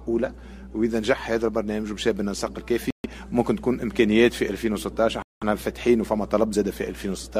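Mains hum runs through the whole recording as a steady low tone at 60 Hz, roughly 20 dB below the audio, the kind of coupling a ground loop or nearby transformer leaks from the power line into the signal path. Bluetooth stalls cut the sound to silence from 2.90 to 3.06 s (about 137 ms of silence) and from 5.22 to 5.43 s (about 192 ms), after which playback resumes. The likely cause is radio interference delaying packets until the headphones' buffer emptied and waited for retransmissions.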